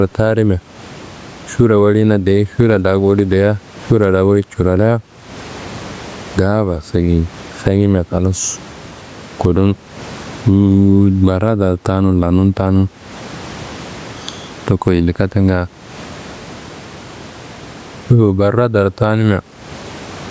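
Throughout the speech, gain pumping is heard, likely from input gain set far too high with a fast limiter pulling it down on each loud sound. The level swings by roughly 20 dB, with room noise about 39 dB below the speech, leaving it squashed.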